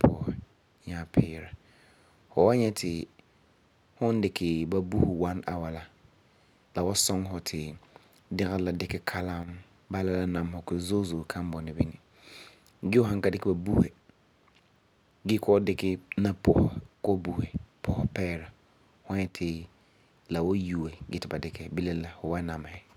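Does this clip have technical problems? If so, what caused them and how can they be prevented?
Yes. At 9.43 to 9.48 s, between "dɛgerɔ la dikɛ" and "bala la", and again at 19.27 to 19.35 s, the speech briefly falls by about 6 dB and then returns. The likely cause is one channel dropping out before the mono sum, which halves the shared signal. Unlike a full dropout, the sound never goes silent, and unlike a gain ride, the drop and recovery are abrupt. Secure stereo cables and connectors, and monitor both channels while recording.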